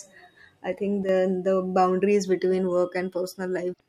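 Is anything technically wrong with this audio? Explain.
Yes, there are two technical faults in this speech clip.

From 1.03 to 1.09 s, the level drops abruptly by about 6 dB for roughly 56 ms, then returns. This is most likely one channel dropping out. One side of the stereo signal goes silent. When the two channels are summed to mono, the speech common to both loses half its contribution. The result is a brief, sudden dip in loudness rather than a fade.

From 3.70 to 3.80 s, there is damaged data in a compressed stream. Part of the encoded data there is corrupt. The decoder cannot read those frames properly and loses its place. It has to hunt for the next valid frame header before normal decoding resumes. During that stretch of about 0.1 s, the speech is disrupted.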